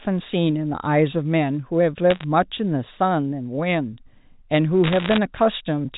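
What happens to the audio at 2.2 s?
A brief burst of sharp ticks and crackle from 2.10 to 2.24 s: bit errors on the digital phone line, where flipped bits each corrupt single samples.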